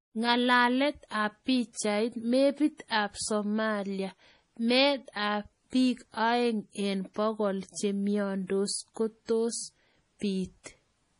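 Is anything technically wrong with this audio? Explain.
Yes. Throughout the speech, the sound carries the watery, swirling quality of MP3 compression at a heavily starved bitrate. That is likely the cause, and the damage fits something near 32 kbps. Nothing remains above 10.6 kHz, because the encoder cut the treble outright. Weak frequency lines drop in and out from frame to frame, which gives s sounds a metallic chirp and smears attacks.

Pre-echo is audible at 1.73–1.75 s, 2.88–2.90 s, 9.25–9.29 s, 10.19–10.22 s and 10.63–10.66 s. Each sharp onset is preceded by a brief hiss lasting 23 to 32 ms. The codec spreads its quantisation noise across the whole block, so the noise meant for the loud attack leaks into the silence just before it and softens the onset.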